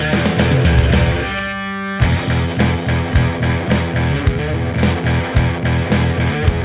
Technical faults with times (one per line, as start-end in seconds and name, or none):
none